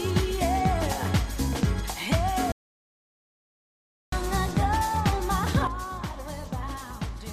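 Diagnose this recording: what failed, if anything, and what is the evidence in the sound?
Playback stall from 2.52 s to 4.13 s: the sound cuts out mid-flow for about 1.6 s, then carries on. This points to the playback stage, where the player likely ran short of buffered data or had its output thread blocked, leaving silence until it recovered.

Sudden gain jump at 5.67 s: the level drops by about 9 dB in a single step and stays down to the end, with the background noise falling along with the sound. A digital gain setting was likely applied in the digital signal path without any ramp.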